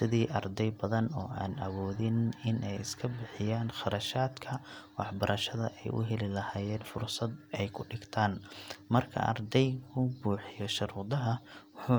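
No technical faults can be heard anywhere in the recording.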